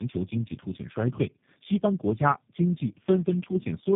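Throughout, the speech sounds rough, muffled and warbly, with nothing above about 3.6 kHz. This points to tandem speech coding: the sound was decoded and re-encoded by three low-rate speech codecs in turn, likely AMR-NB, GSM full rate and G.729A, each adding damage to the last.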